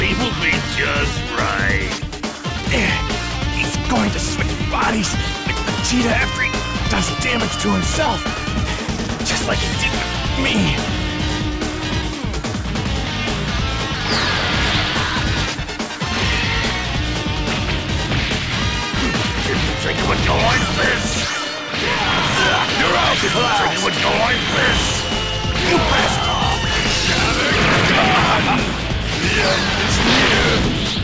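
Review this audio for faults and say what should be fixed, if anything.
Nothing here needs fixing: the audio came over a call link, so its top end stops at about 8 kHz, which fits a wideband call codec such as G.722 and is simply how that path sounds.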